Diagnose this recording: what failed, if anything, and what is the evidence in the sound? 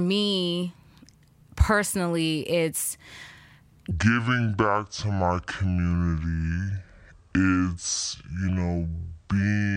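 From 3.91 s to the end of the speech, everything drops abruptly into a deep, dragging register, a section at the wrong speed running at 0.573 times its proper rate, with pitch falling by roughly ten semitones in step with the slowdown. Because speed and pitch move together, this is a resampling or clock mismatch rather than time-stretching. The likely cause is that stretch being played or edited against the wrong sample clock.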